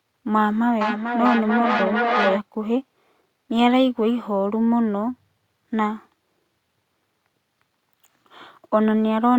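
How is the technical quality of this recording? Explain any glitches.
The recording has one clear glitch, a feedback echo between two devices, from 0.81 to 2.44 s. The speech comes back at a steady interval of roughly 0.4 s, each repeat thinner and more ringing, and at its loudest the echo sits about 2 dB below the speech itself, so the repeats crowd in on one another rather than fading away. This happens when a second device in the same room replays the call and the first microphone picks it up again; each device's echo canceller removes only its own playback, so the sound keeps circulating.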